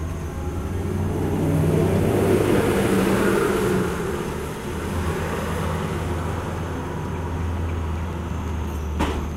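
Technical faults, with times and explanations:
7.96 to 9.33 s, train of clicks: Something is injecting a short pulse into the signal path about 5.9 times per second, likely interference from nearby equipment or a faulty connection or power supply. Around ten near-identical clicks arrive at a steady, regular spacing, each peaking at roughly the level of the sound itself. The result is a clear mechanical ticking laid over the final stretch of audio, plainly audible through quieter moments as well.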